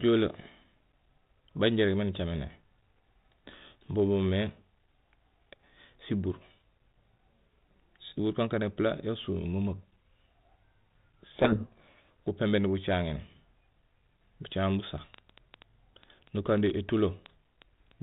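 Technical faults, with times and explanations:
11.32 to 12.08 s, codec payload misread: the G.726 code words arrive in reversed bit order, so the speech is buried in harsh distortion rather than plain hiss.
14.84 to 17.92 s, train of clicks: about twenty similar pops, irregularly spaced at roughly 5.5 per second and peaking above the speech, likely from electrical interference, not codec error.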